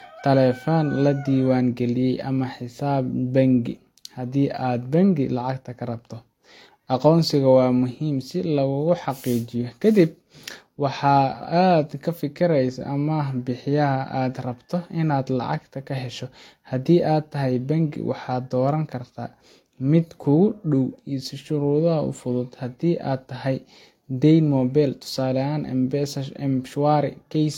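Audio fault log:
Throughout, transcoding between lossy codecs: the speech carries two overlapping sets of coding artefacts at once, with nothing above 16.6 kHz. The smeared, synthetic high end fits a low-rate HE-AAC stage near 40 kbit/s, and a second layer of swirly, watery noise fits a later Vorbis encode near 60 kbit/s. The cause is likely re-encoding, where the second codec spends bits reproducing the first codec's damage and stacks its own on top.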